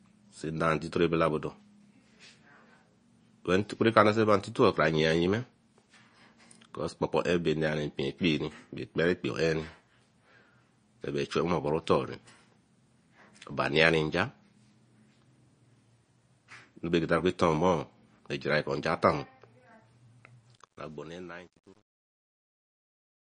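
The whole clip has a watery, swirly quality with smeared attacks and nothing above 9.8 kHz, which is likely MP3 compression at a low bitrate, something like 32 kbps. Bits ran short, so weak frequency components flicker in and out between frames, and the damage is plainly audible.

From 20.47 s to the end there's truncation distortion on the fade. The fade was done with too few bits and no dither, which fits a stage of about 10 bits, so the quiet tail turns into coarse steps. It sounds gritty, worst from 20.89 s onward.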